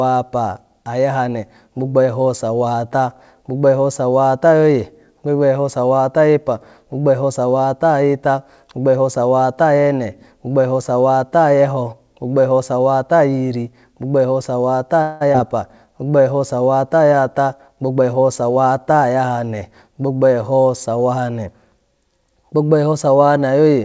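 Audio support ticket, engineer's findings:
Call audio freeze, 15.02–15.23 s: speech halts and the last sound is stretched into a fading buzz for about 187 ms, then resumes where it stopped with nothing lost. Likely delayed packets draining the jitter buffer. Spectrogram: smeared, decaying harmonic band; waveform: tapering filler.

Skip ahead, 15.33–15.36 s: playback jumps forward, roughly a tenth of a second of speech dropped, with an 11 ms splice joining both sides. Buffer overflow or loss with later audio queued. Waveform: abrupt discontinuity; spectrogram: formant tracks break mid-trajectory.

Jitter buffer slow-down, 15.86–16.23 s: speech drawn out to 88% speed at unchanged pitch, 52 ms added by repeating pitch periods to rebuild reserve. Spectrogram: elongated vowels, harmonic spacing constant; waveform: near-identical cycles repeated in a row.

Jitter buffer speed-up, 17.12–18.71 s: speech hurried at 109% speed with pitch held, around 150 ms trimmed in short pitch-period cuts to reduce excess delay. 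Spectrogram: compressed syllable durations, harmonics unchanged; waveform: tighter cycle sequences. G.722 path band-limited, nothing above 8 kHz.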